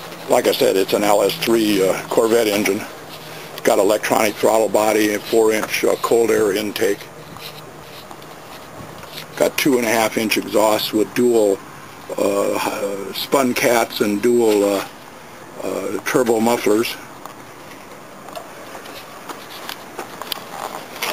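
Nothing goes wrong anywhere in this audio, so there's no fault to point to at any moment.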